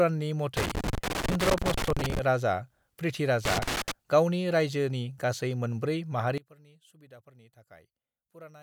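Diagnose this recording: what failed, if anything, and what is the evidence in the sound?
Loose connector crackle in the analogue wiring: irregular scratchy bursts from 0.57 to 2.19 s and 3.45 to 3.91 s, just before "गावनि रायजोनि गासै मोनब्रै", from a contact making and breaking.

From 6.38 s, after "गावनि रायजोनि गासै मोनब्रै", the speech drops about 23 dB. That's likely one channel inverted, cancelling centred content when summed to mono.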